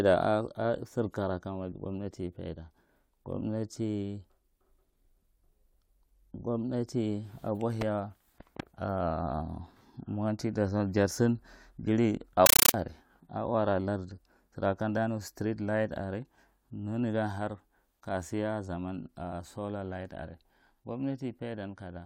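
Speech clip where, from 12.46 to 12.74 s, a compressed stream is played as audio: an undecoded AC-3 bitstream becomes loud chattering static, showing as full-band noise bursts about 9.3 ms long repeating 31.25 times a second, separated by flat silence.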